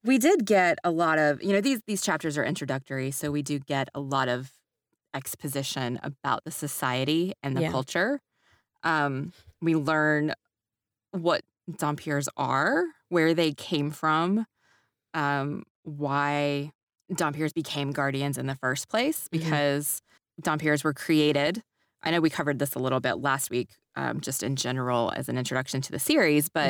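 No technical faults are audible anywhere in the recording.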